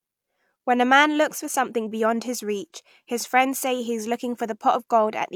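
Speech recording with no technical faults audible anywhere in it.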